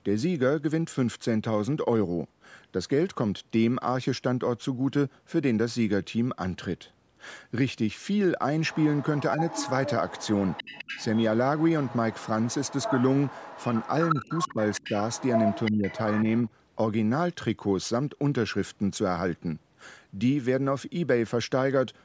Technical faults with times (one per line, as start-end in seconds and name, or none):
8.70-11.26 other side's voice leaking through
11.58-16.49 other side's voice leaking through
14.21-14.85 speech suppressed in double talk
15.71-15.84 speech suppressed in double talk